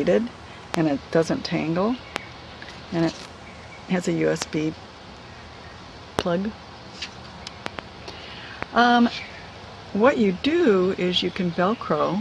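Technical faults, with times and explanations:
0.74, 2.16, 4.42, 6.19, 7.66 to 7.81 and 8.63 s: loud pop. Each is a single sharp pop except at 7.66 to 7.81 s, where two come in quick succession. Each peaks roughly 20 dB above the surrounding level while the sound carries on underneath. This is likely a sudden voltage step from a plug, switch or static discharge, shaped by the circuitry into a thump. Unlike a dropout click, nothing is missing around it.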